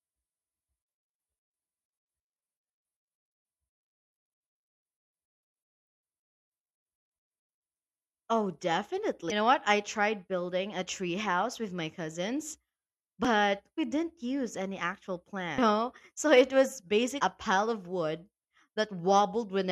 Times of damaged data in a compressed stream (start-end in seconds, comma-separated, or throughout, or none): 9.30, 13.25, 15.57, 17.19